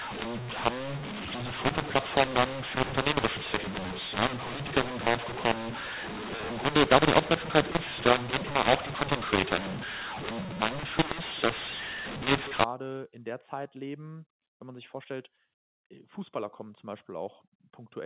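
From 0.00 s to 12.64 s, mu-law and A-law are mixed up. The speech was coded with G.711 mu-law but decoded as A-law. The two laws map levels differently, so the amplitudes come out scrambled. Some parts are too loud and others too quiet. The speech sounds harsh and distorted. The quietest samples are lifted well above silence, so the pauses fill with hiss. Throughout, the telephone band stops at 4 kHz.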